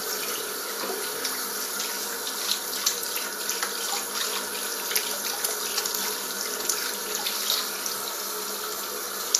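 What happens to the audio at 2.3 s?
At 2.3 s the audio carries the same Vorbis compression damage heard throughout the clip, likely from a low-bitrate encode around 37 kbps. Nothing sits above 14.2 kHz, and the treble is quantised so coarsely that fine detail turns to hissy, grainy noise, with roughened tones and softened attacks.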